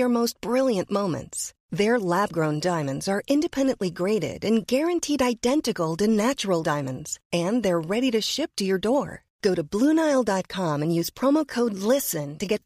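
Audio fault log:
No faults are heard anywhere in the speech. Nothing in the recording calls for a log entry.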